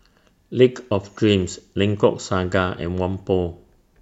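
Nothing in this recording trips the ear as a technical fault; the speech runs along without anything breaking in to interrupt it.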